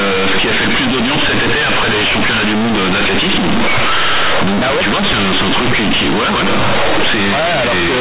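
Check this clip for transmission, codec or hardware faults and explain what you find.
There is one fault, and it runs through the whole clip: companded audio read as linear. The speech was carried as mu-law G.711, whose 8 kHz telephone coding itself is intact and still caps the band at 4 kHz, but the playback side treated each logarithmic byte as a plain linear 8-bit sample instead of expanding it. Every sign change therefore lurches across about half the output range, quiet passages come out as large as loud ones, and the waveform is badly warped. The result is harsh, very loud, buzzing distortion over the speech, with heavy noise filling the pauses.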